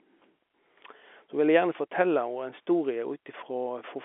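No technical faults can be heard at any point in this speech clip.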